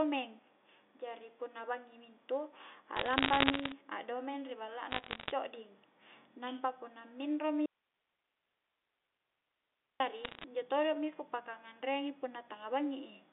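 Between 2.97 and 3.72 s, and again from 4.90 to 5.31 s, bit errors on a digital phone line scatter sharp ticks and crackle across the speech. Roughly one bit in a hundred and fifty arrives flipped, and each one corrupts a single sample of the G.711 stream. When a flip lands on the sign or a high-order bit, that sample jumps far from its neighbours and clicks. The speech between the ticks keeps its narrow telephone band of about 250 Hz to 3.6 kHz and its level. That separates these errors from a codec collapse or clipping, which would distort the speech itself. A third, denser burst from 10.24 to 10.44 s, at about one percent, crackles harder.

From 7.66 to 10.00 s, an audio dropout to a faint residue removes the speech for about 2.3 s. Only hiss remains, roughly 50 dB below the speech level. The likely cause is a break upstream while the line after it stayed live. The cut and the return are both instant, and the hiss never goes silent. 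A fade would taper, and a natural pause would not flip abruptly between full-level speech and a bare noise floor.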